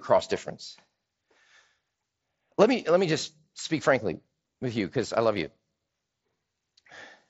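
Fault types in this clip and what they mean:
No faults detected in this speech.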